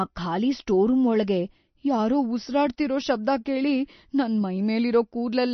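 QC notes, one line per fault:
Throughout: MP3 compression. The speech has no content above about 6.1 kHz and a clearly watery, swirling texture, with s sounds chirping and consonant attacks smeared. This likely comes from MP3 encoding at a low bitrate consistent with roughly 32 kbps, cutting treble and flickering weak frequency lines.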